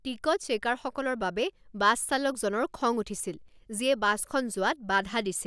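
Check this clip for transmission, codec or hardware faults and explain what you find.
Nothing in the speech points to a transmission, codec or hardware problem.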